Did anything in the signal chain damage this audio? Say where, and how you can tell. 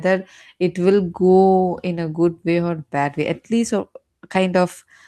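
No, nothing in the signal chain damaged this speech recording. No stage, from capture through to playback, has left any audible mark on it.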